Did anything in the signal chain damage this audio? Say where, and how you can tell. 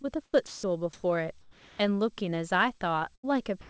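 Yes, and the damage is in the call path's network transport and its transmit-side voice detection, not in the codec itself. The G.722 coding at 64 kbps simply leaves nothing above 8 kHz.

Short concealed packet loss occurs at 0.02 to 0.05 s. About 20 ms of audio failed to reach the decoder in time. The receiver bridged the hole by extending the preceding sound and then crossfading back into the real signal. You hear this as a brief smear right at the start, with a fraction of the opening sound missing.

Comfort noise in place of the background appears at 0.25 to 0.33 s, 0.93 to 1.03 s and 1.41 to 1.79 s. The likely cause is discontinuous transmission: the sender stopped transmitting during pauses, and the receiver generated synthetic noise instead. The real background, which sits roughly 30 to 36 dB under the loudest speech, is replaced by a flat, featureless hiss. Its level doesn't match: about 9 dB quieter in the first patch, about 15 dB louder in the second and about 3 dB quieter in the third.

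Sound dropped by the voice detector occurs at 0.47 to 0.63 s and again from 3.61 s to the end. Here the detector likely judged real sound to be background and cut transmission. About 140 ms of sound is lost in the first case and about 80 ms in the second. Steady noise or near silence takes the place of the sound, and the clip's final moment is gone entirely.

A burst of packet loss runs from 3.15 to 3.25 s. About 80 ms of consecutive audio arrived too late or not at all. The concealment repeated the last sound while fading it down. Speech then resumes further along, with the section in between missing.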